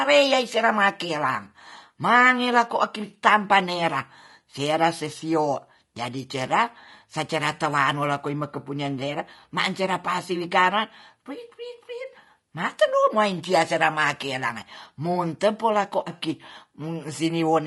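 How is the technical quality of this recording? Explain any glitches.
The speech carries plainly audible coding damage from start to finish. Throughout, voices sound rough and grainy, with noise filling the gaps between harmonics. This is likely low-delay AAC compression (AAC-ELD): its short frames of about 500 frequency lines blur pitch harmonics, and a bitrate near 32 kbps starves them further.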